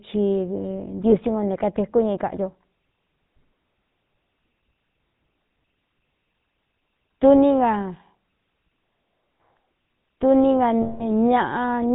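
Throughout, the GSM full-rate codec gives a buzzy, gravelly roughness and nothing above 4 kHz, fitting 13 kbps full rate; unlike narrowband filtering alone, the grit comes from pulse-coded excitation. From 1.10 to 1.13 s, just before "ngo ne", lost GSM frames hold the sound as a brief metallic ring, fitting one concealed 20 ms frame. At 10.82 to 11.08 s a longer loss, fitting about nine frames, rings rather than cutting abruptly like a dropout.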